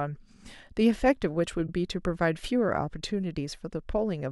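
At 1.66 to 1.69 s the speech has a repeated frames fault: a single compressed block of about 26.1 ms was decoded twice, so the same sliver of sound plays back-to-back and the clip grows by 26.1 ms. That block length fits one MP3 frame at 44.1 kHz. It sounds like a brief stutter rather than a gap. Unlike a dropout, nothing is lost, and unlike concealment it repeats exact content rather than a smeared imitation.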